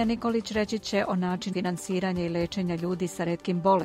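There's one glitch in this audio, at 1.52 to 1.54 s: compressed frames skipped. Something like 150 ms of sound just vanishes, which points to several whole frames missing or rejected by the decoder.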